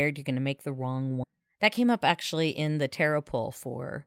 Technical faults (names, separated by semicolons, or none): skip ahead; jitter buffer speed-up